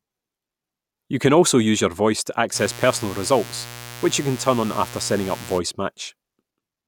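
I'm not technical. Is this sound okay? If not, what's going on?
No. Mains buzz, 2.53 to 5.61 s: sharp spikes from 60 Hz power wiring leak in twice per cycle, adding a steady, raspy buzz.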